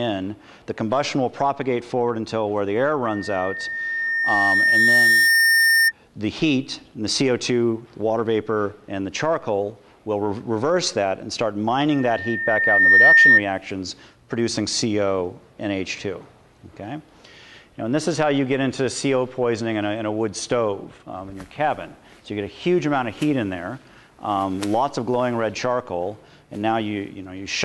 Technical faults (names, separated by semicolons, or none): loudspeaker feedback squeal